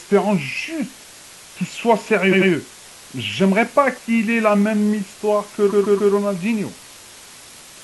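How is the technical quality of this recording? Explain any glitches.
The technical quality is poor. A constant hiss sits under the whole recording, and the speech stutters twice.

Throughout the clip, an even, steady hiss runs at roughly 20 dB below the speech, without the gritty distortion that plain coarse rounding would give. This is low bit depth with dither: the signal appears to be held at only about 6 bits, and noise was added before rounding. That turns the quantisation error into a smooth white-noise floor instead of a rough distortion that follows the signal.

From 2.28 to 2.47 s, a short stretch of about 92.9 ms plays again twice in a row, adding 185.8 ms to the recording. From 5.67 to 6.09 s, a longer 139.3 ms stretch repeats three more times, adding 418 ms. These are repeated frames. Blocks of compressed audio were written or delivered more than once, so the decoder replayed the same piece and the speech jerks back on itself in a stutter.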